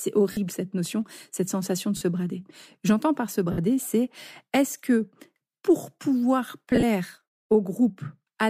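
At 0.32 s, just before "cette notion cette sensation", about 50 ms of lost LE Audio frames leave a brief noisy blur. The LC3 decoder, likely working in 10 ms frames, fills the hole by replaying the last spectrum with random signs. Similar smears hit at 1.97 s (40 ms) and at 3.52 s (60 ms), right after "par se". After "que pour pouvoir", from 6.71 to 6.83 s, short dropouts are scattered across 120 ms, the longest only a few tens of ms.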